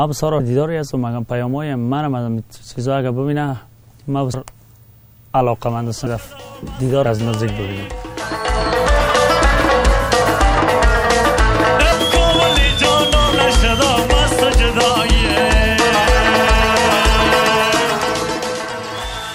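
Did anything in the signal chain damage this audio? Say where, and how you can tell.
Yes, at the codec stage: compressed frames were skipped during decoding, either missing from the file or rejected as damaged. At 4.34 s the audio leaps forward by roughly a fifth of a second, consistent with several 32 ms frames dropped.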